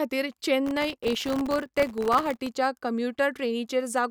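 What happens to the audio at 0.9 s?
At 0.9 s the speech is in the middle of a processor overload crackle that runs from 0.66 to 2.47 s. The processor keeps missing its deadlines for very short buffers, well under a millisecond each, and each missed buffer drops to silence with hard edges. Well over a hundred such gaps combine into a gritty tearing over the speech. On a waveform these show as tiny flat breaks, and on a spectrogram as thin full-height vertical stripes.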